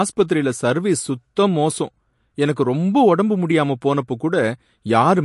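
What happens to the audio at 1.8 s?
At 1.8 s, as across the whole clip, the speech carries MP3 compression at a bitrate likely near 48 kbps: nothing above 11.3 kHz, a flat spectrogram ceiling, flickering high bands, and plainly watery, swirly sibilants.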